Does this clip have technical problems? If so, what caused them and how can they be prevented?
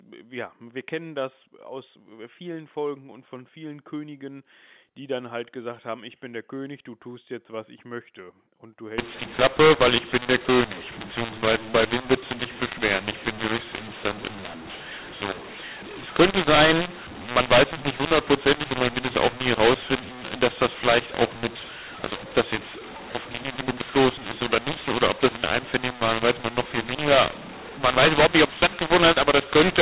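Yes. From 8.98 s to the end, the speech becomes harsh and distorted, and the pauses fill with noise. This is a mu-law and A-law mix-up. The G.711 telephone audio was encoded with the mu-law curve and decoded with the A-law curve, so sample levels are scrambled and the quietest samples are lifted well above silence. To prevent it, signal the companding law explicitly and confirm that both ends of the link are configured for mu-law.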